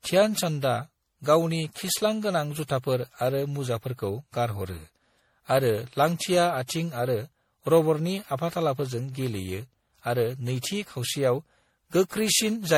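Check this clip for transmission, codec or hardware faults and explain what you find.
One codec fault runs through the whole clip. Generation loss, present from start to finish, is likely the result of the speech passing through a lossy codec around seven times, each decode and re-encode quantising again on a shifted frame grid so noise and spectral holes accumulate. The character points to MP3 at a rate that fits 64 kbit/s, with nothing above 18.2 kHz. It sounds swirly, smeared and hollow, more than that bitrate alone would produce, and consonant attacks blur.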